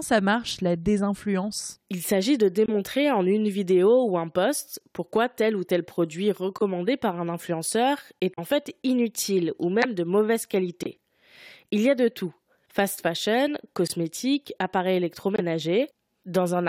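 Right from the start you get little dropouts in the speech, the classic corrupt frame muted pattern: at 2.66 to 2.69 s, 6.58 to 6.63 s and 8.34 to 8.39 s the sound just cuts to silence abruptly and comes straight back. Those are frames the decoder threw out because their bits were damaged, with the player filling the gap with nothing. The gaps run about 30 to 60 ms, which fits one or two codec frames each, and timing never slips.

Then at 9.82 to 9.85 s there's a corrupt frame decoded event. Here the damaged data got played anyway, so misread gains and codes spray energy into the wrong frequencies. It comes out as a short, loud burst, peaking fairly close to full scale. Squeezed into under 40 ms, it sounds like several frames went wrong together.

After that the muting comes back at 10.83 to 10.88 s, 13.86 to 13.92 s and 15.36 to 15.40 s. These are the same kind of sudden holes, each again about the length of one or two frames.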